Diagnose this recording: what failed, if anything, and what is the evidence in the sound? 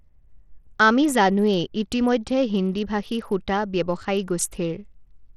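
The damage sits at the codec stage and runs through the whole speech clip: the treble drops out and flickers, with a gritty noise and aliasing riding on it. That's likely Bluetooth SBC compression, starved at something like 80 kbps, leaving its top sub-bands with almost no bits.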